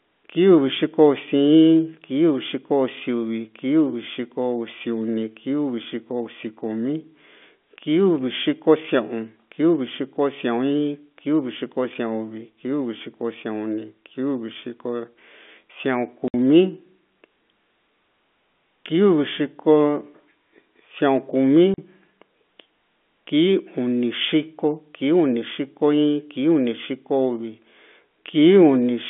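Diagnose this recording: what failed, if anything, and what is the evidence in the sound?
Packet loss filled with silence at the network stage, with gaps at 16.28 s lasting 60 ms and at 21.74 s lasting 40 ms. Both dropouts are sharp-edged holes, and their lengths suggest whole 20 ms packets were lost and replaced by silence rather than concealed. The narrow telephone band of the G.711 line carries through unchanged around both gaps.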